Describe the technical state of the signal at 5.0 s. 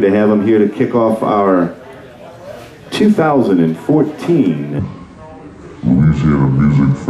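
At 5.0 s the signal sits inside a section at the wrong speed, running from 4.79 s to the end of the clip at 7.10 s. Playback there runs at 0.655 times the original rate, likely from the section being clocked at the wrong rate, so the sound drags and drops by about seven semitones. Unlike a pure pitch shift, timing slows along with pitch, stretching every event in step.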